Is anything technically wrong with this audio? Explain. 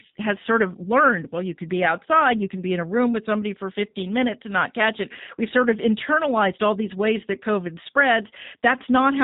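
Yes. Throughout, there is plainly audible G.729 codec damage. The speech is rebuilt from a filter and sparse pulses, consistent with 8 kbit/s, so it sounds rough and synthetic. A spectrogram shows nothing above 4 kHz.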